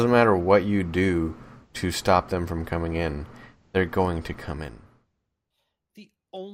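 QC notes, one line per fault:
No faults found.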